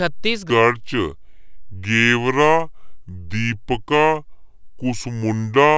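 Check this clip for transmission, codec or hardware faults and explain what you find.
There's one fault, a wrong sample rate, from 0.50 s to the end. The speech plays at about 0.73 times normal speed and roughly 5.5 semitones lower, which fits 22 kHz audio read out at 16 kHz without conversion, so everything sounds low, slow and dragged.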